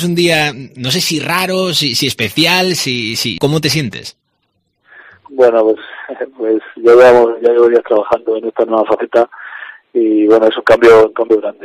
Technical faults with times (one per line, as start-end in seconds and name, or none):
0.19-0.47 hard clipping
1.78-2.57 hard clipping
3.44-3.77 hard clipping
5.40-5.71 hard clipping
6.87-8.14 hard clipping
8.61-9.23 hard clipping
10.31-11.35 hard clipping